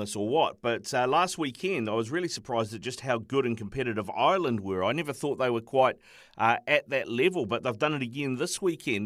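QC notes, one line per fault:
Nothing stood out on listening to the speech.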